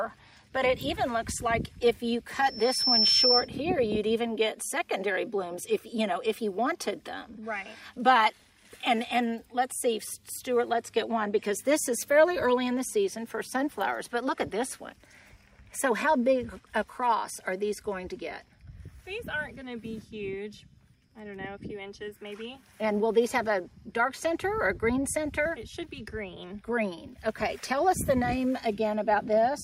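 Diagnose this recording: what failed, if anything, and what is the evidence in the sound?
An acoustic loop between the playback loudspeaker and the microphone reached a gain above one at 5.4 kHz, causing loudspeaker feedback squeal. From 2.42 to 3.49 s a single 5.4 kHz tone swells over about half a second into a squeal that sits about 5 dB above the program.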